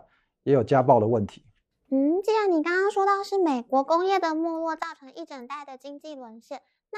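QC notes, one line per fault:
4.83 to 6.98 s, sudden gain jump: at 4.83 s the level of the speech drops abruptly by about 12 dB and stays down to the end of the clip, with the background noise falling by the same amount at the same instant, so the step lands on sound and floor together rather than on the talker alone. That shared, instantaneous drop with no fade points to a likely digital gain change applied between one sample and the next, without any ramp.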